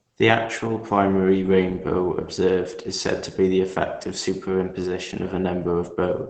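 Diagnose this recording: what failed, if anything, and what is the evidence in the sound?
The codec stage failed: the speech sounds muffled and hoarse across the whole clip, with nothing above 8.9 kHz. That narrowed band and rough texture point to heavy Opus compression in its speech (SILK) mode, likely from a starved bitrate near 12 kbps.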